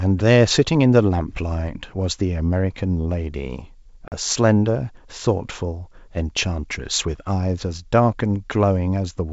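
At 4.08 to 4.12 s, packet loss on an ADPCM call cuts a 40 ms silent hole. Unlike a plain dropout, the speech returns with brief distortion as the G.722 predictor resynchronises.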